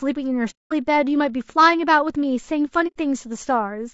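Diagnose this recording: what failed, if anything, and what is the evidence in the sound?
Low-delay AAC compression, throughout the clip, at the codec stage. The speech is plainly rough and grainy for its whole length, with noise filling the gaps between harmonics and a top band that sounds thin and synthetic. The likely cause is AAC-ELD at a low bitrate, around 32 kbps. Its short frames separate pitch harmonics poorly, and with too few bits at that rate the encoder smears noise across the spectrum.

AAC frame loss with muting, at 0.50 to 0.73 s and again at 2.87 to 2.98 s, at the network stage feeding the decoder. Each is a soft-edged hole in the speech. The sound fades out, stays silent, then fades back in. The first gap fits about 210 ms of missing audio and the second about 90 ms. The decoder zeroed the spectrum of the missing frames, and the overlapping windows blended that silence smoothly into the surrounding audio.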